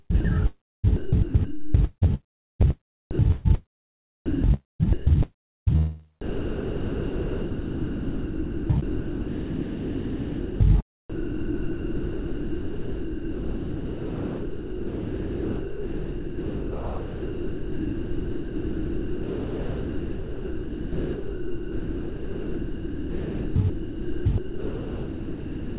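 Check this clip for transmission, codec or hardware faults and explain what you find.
Several transmission faults appear, most from a voice detector on the sending side, heard through a narrowband path with nothing above 4 kHz, consistent with G.711 mu-law.

Sound chopped by the voice detector, 0.12–4.85 s, 4.26–5.69 s, 6.22–10.60 s and 11.10 s to the end: switching likely flickered repeatedly, swapping stretches of sound for synthetic comfort noise. The repeated back-and-forth distinguishes it from a single drop.

Long network dropout, 2.15–2.62 s: about 0.46 s of audio likely never arrived. A fading buzz fills the gap before silence, unlike the detector's steady comfort noise.

Sound dropped by the voice detector, 3.11–3.19 s: a single 80 ms piece likely read as background gives way to comfort noise once, with no fading tail.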